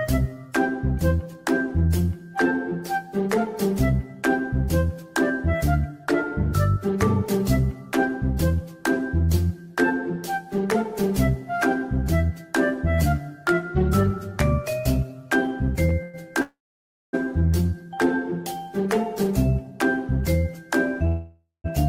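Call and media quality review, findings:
Call audio freeze at 16.03–16.15 s, 16.41–17.15 s and 21.07–21.66 s: jitter buffer ran empty, likely from delayed packets. Last sound stretched into a fading buzz, dropping to silence for the final 0.58 s and 0.17 s of the longer two. Playback then resumes where it stopped, with nothing missing.

Jitter buffer speed-up at 18.77–19.72 s: backlog trimmed by cutting pitch-period slices, about 40 ms in total. Audio runs at 104% speed, same pitch.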